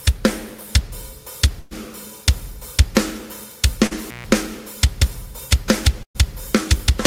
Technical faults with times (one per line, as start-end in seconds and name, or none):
1.59-1.73 burst of packet loss
3.87-3.93 short concealed packet loss
4.06-4.25 intermittent contact
6.03-6.17 burst of packet loss